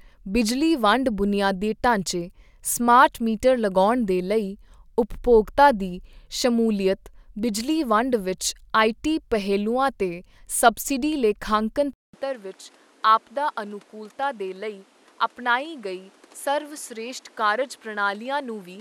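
At 11.93 s the speech cuts out for about 200 ms, then returns quieter by roughly 10 dB and duller, with nothing above 13 kHz. New background noise sits around 30 dB below the speech. The sound stays that way to the end of the clip. This abrupt, lasting change in tone, level and background points to the input likely having switched to a poorer device with a narrower band and its own noise.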